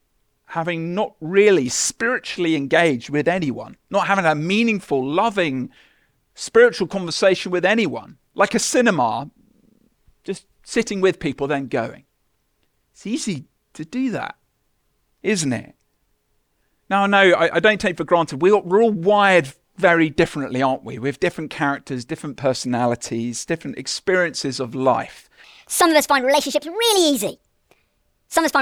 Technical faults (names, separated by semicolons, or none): section at the wrong speed